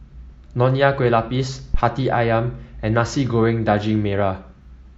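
At 1.74 to 1.82 s, a phantom power thump: switching a supply on or off on the live input sends a voltage step through the coupling capacitors. The deep thud peaks at about -6 dBFS, decays in 17 ms, and shows as one large waveform swing and a low-frequency spectrogram smear.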